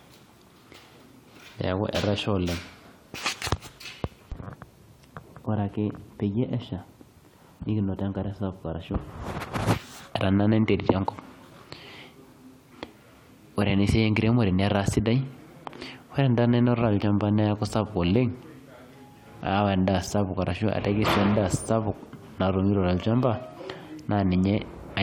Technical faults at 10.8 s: none

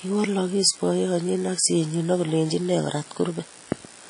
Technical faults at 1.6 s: WMA compression

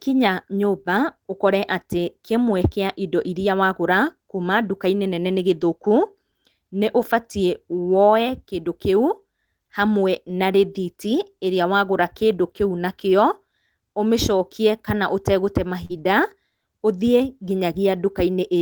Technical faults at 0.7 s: none

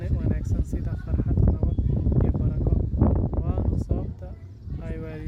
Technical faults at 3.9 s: none

